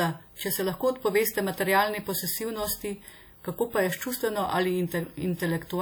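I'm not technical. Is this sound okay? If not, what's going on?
No. Throughout, the speech has a ringing, washy quality with hiss that swells and fades with the voice, likely from WMA compression.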